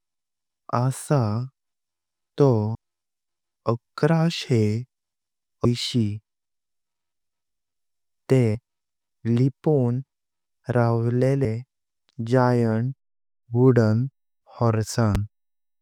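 Speech, with two instances of audio missing between chunks, at 2.75 s and 8.55 s. Each time roughly a tenth of a second vanishes and the two sides butt together, likely from a chunked recorder or processor dropping audio between 3-second blocks. On a waveform this shows as an abrupt seam, and on a spectrogram as a hard vertical discontinuity. At 15.15 to 15.17 s a single loud pop sits about 10 dB above the speech, likely a voltage step from a plug, switch or static discharge. It appears as a tall narrow spike on the waveform and a bright full-band vertical stripe on the spectrogram, with the speech continuing beneath it.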